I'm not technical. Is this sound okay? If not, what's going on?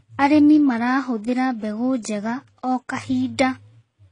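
No. For the whole clip the speech has a dull sound, with nothing above about 10.2 kHz, so the crisp top end is missing. This is likely transcoding between lossy codecs: the audio was squeezed by one compression method and then squeezed again by another. What sets it apart from a single round of compression is the mix of two kinds of damage at once, the flaws left by the first stage plus the ones added by the second.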